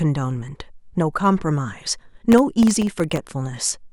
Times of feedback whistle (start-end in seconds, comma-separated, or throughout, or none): none